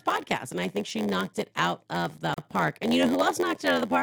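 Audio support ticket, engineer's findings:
Block size mismatch (padded), present throughout the speech. Steady buzz at 86.1 Hz under all of it. Playback runs slow, 0.938 times normal speed, with pitch about unchanged. Probable component: a stage boundary where the writer fills less of each block than the reader takes. The rest of each block goes out as zeros. A short gap every block gives the buzz. Rate fits a 512-sample read block, with roughly 480 samples written.

Gap at a join of encoded pieces, 2.34 to 2.38 s, right after "it out of the". A gap of about 36 ms cuts into continuous speech, with a shorter silent part. Edges smeared by the codec. Speech resumes where it stopped. Probable component: concatenation of separately encoded segments. Encoder start delay and last-frame padding were left untrimmed at the join.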